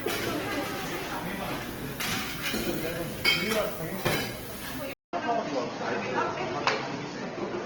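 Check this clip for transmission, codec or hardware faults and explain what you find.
Two faults can be heard in this recording of everyday sounds: a codec problem throughout and an abrupt change of input near the end.

From start to finish the sound has a rough, grainy texture, with tonal parts turning noisy and gritty instead of swirling or leaving gaps. Content still reaches about 20.3 kHz, so the full bandwidth is kept while detail inside the bands is thinned. This is likely Opus compression in its music (CELT) mode: at a low bitrate, fitting roughly 16 kbps, the encoder preserves each band's energy and fills starved bands with noise or folded copies of lower ones, which produces this graininess.

At 4.93 s the sound drops out for about 200 ms. From there to the end it comes back dull and boxy, with nothing above 6.1 kHz, a level change of about 5 dB and a faint new background noise sitting far below the sound. 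The likely cause is the input being switched to a poorer device, such as another microphone or a headset's call profile. That device passes a narrower band and brings its own level and noise floor, and the short gap comes from the handover.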